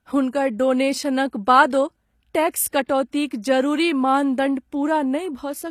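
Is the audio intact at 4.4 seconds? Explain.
No. Throughout the clip, including 4.4 s, the treble was likely rebuilt by HE-AAC compression's spectral band replication, fitting a low bitrate near 24 kbps. Copied upper bands misalign harmonics, so s sounds turn gritty and metallic, with nothing above 14.9 kHz.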